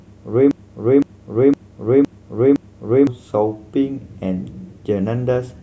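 A speech clip with a system hang loop. From 0.51 to 3.07 s, one 512 ms chunk repeats five times, a stutter about twice per second. This fits an 8192-sample buffer. Roughly three seconds of audio are lost.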